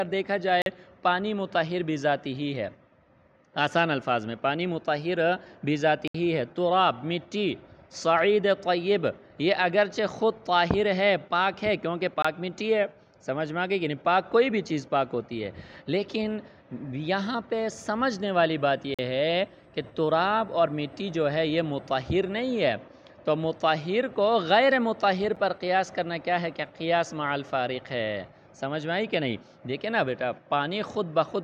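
Five times the output buffer was likely not filled in time, so blocks of samples went out as zeros, each a block of digital silence. The sound drops out abruptly and returns with no fade: 0.62 to 0.66 s and 18.94 to 18.99 s (about 43 ms each, which fits 2048-sample blocks at 48 kHz), 6.08 to 6.14 s (about 69 ms), 12.22 to 12.25 s (about 21 ms), and a single tick at 25.36 s.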